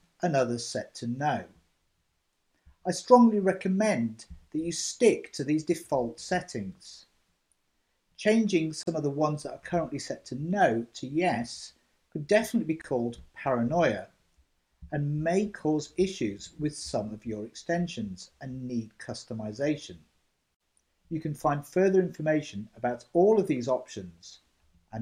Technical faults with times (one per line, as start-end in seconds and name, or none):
8.83-8.87 gap at a join of encoded pieces
12.82-12.84 gap at a join of encoded pieces